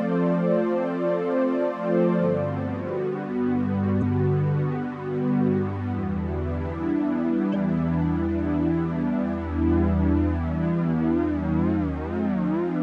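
Two 44 ms faults, at 3.99 s and 7.51 s, are damaged data in a compressed stream: the decoder misreads the frames there and loses sync.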